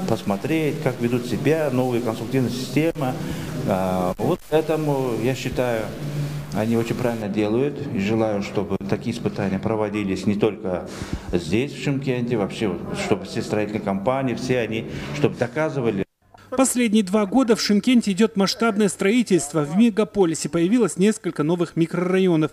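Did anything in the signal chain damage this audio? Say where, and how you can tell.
Yes. From 0 to 7.22 s the sound is distorted and pauses fill with noise. This is a stuck bit, likely a failed converter data line, shifting samples by a fixed step of about -40 dBFS. A waveform shows small square offsets, and a spectrogram shows broadband grit ending abruptly at 7.22 s.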